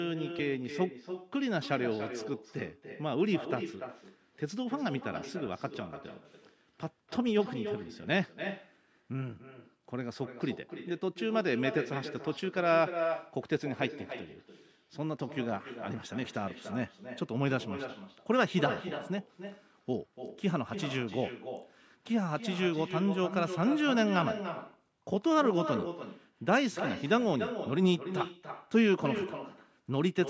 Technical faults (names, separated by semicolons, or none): echo with no canceller